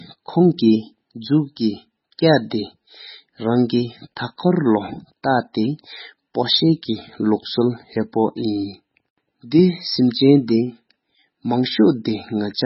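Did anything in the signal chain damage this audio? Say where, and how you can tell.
Yes. The damage sits at the codec stage and runs through the whole speech clip, likely from MP3 compression at a very low rate. Nothing survives above 5.6 kHz, so on a spectrogram the energy stops at a flat ceiling, with patchy holes flickering in and out below it. It sounds heavily watery and swirly, s sounds are dull, and onsets smear. That fits an encoder starved to around 16 kbps, cutting the treble and dropping weak frequency lines frame by frame.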